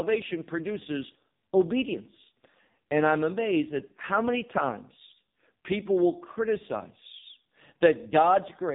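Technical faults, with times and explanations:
Throughout, AMR narrowband mobile codec: the speech is rebuilt from a vocal-tract model driven by a few pulses per short frame, so it sounds heavily buzzy and synthetic, with nothing above 3.7 kHz. Damage this severe fits one of AMR-NB's lowest bitrates, near 5 kbps.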